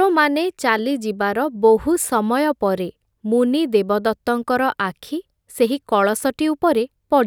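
No technical faults are audible.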